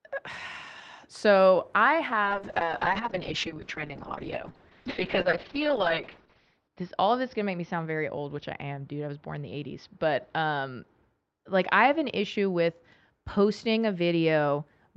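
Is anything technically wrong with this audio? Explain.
Yes. A call bitrate drop runs from 2.23 s to 14.71 s. The call's bandwidth estimate fell, so the encoder was told to spend far fewer bits. Coding became much coarser, and the audio band narrowed from about 16 kHz to 6 kHz. The speech turns rough and watery and loses its brightness. The worst stretch lasts about 4.5 s, with a thin, smeared quality that fits a fall from roughly 40 kbps to near 6 kbps on the Opus call path.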